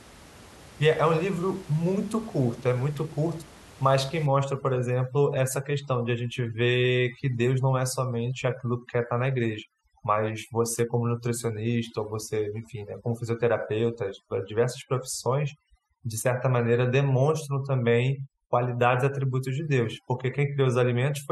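Overdone noise removal runs from 4.26 s to the end at 21.31 s. A noise reduction stage is pushing individual frequency bands far down or shutting them off whenever they sit near its noise estimate, so the room noise, about 23 dB below the speech, drops and breaks up into twinkling specks. Quieter parts of the speech fall under the same threshold and are stripped away.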